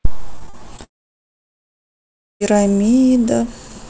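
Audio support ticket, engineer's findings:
Repeated packet loss (robotic sound), 0.36–0.80 s. Six short holes, the longest about 38 ms, roughly a fifth of the span patched by extending the preceding sound. Choppy texture with brief pieces missing. Probable component: jitter buffer / packet-loss concealment on the G.722 call path, which carries the audio band-limited to 8 kHz.

Long network dropout, 0.84–2.42 s. Brief concealment buzz fading out, then about 1.5 s of silence. Audio resumes at 2.42 s with the gap's content never recovered. Likely cause: upstream network outage; the receiver stopped extending the last sound and left silence.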